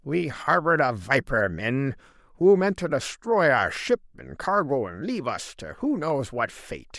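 Speech with two sharp clicks at 0.79 s and 6.10 s, likely dropped samples: a couple of samples vanish, the waveform jumps abruptly, and each click shows as a thin vertical spectrogram line.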